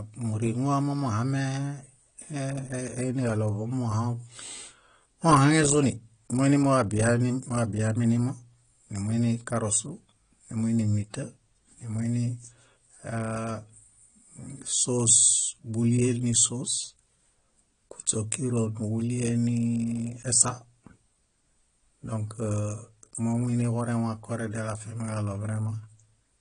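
AAC compression throughout this speech recording: nothing survives above 10.1 kHz, and the dull, smeared sibilants likely come from low-bitrate AAC-LC, consistent with about 32 kbps.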